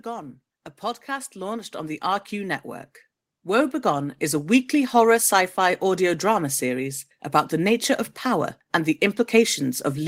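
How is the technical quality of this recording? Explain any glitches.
The recording has a level problem: automatic gain rising twice, from 0.05 to 2.69 s (about 8 dB) and 3.43 to 4.62 s (about 5 dB, ending before "horror sci fi audio"). The AGC judged the input too quiet and ramped up, so speech and background swell together.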